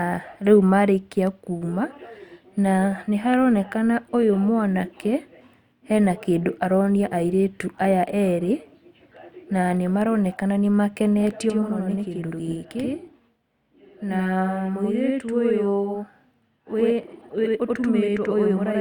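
From 11.50 s onward, speech doubles into an equal-level slap 85 ms late: channel delay (doubling), one channel lagging, fitting a 4096-sample buffer, summed to mono.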